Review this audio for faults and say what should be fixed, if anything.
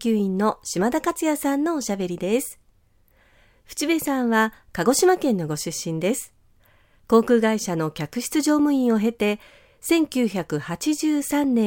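Nothing to fix: no faults turned up anywhere in the recording, so it can stay as it is.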